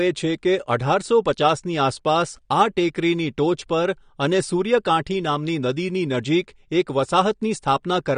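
Speech carries plainly audible AAC compression throughout, likely AAC-LC at a rate that fits about 32 kbps. Nothing is present above 9.7 kHz. Unlike a plain low-pass filter, which would simply dull the top end, this leaves sibilants smeared, with a warbling or fizzy texture from quantised, patchy spectral bands.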